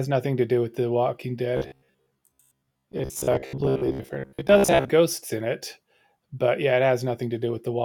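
A speech clip with robotic sound from repeated short buffers from 1.57 to 4.90 s, ending just before "ghosts in it but". A rigid metallic buzz near 66.8 Hz is heard, likely from roughly 15 ms buffers being replayed while about half the real audio is skipped. The spectrogram shows evenly spaced 66.8 Hz harmonic lines, and the waveform shows identical cycles repeating.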